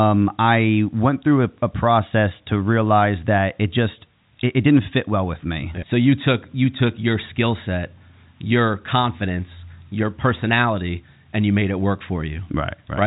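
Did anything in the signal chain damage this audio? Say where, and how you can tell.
No, the chain did no damage: the speech has the G.711 telephone coding you would expect, with the band stopping around 3.8 kHz, as normal for the narrowband line.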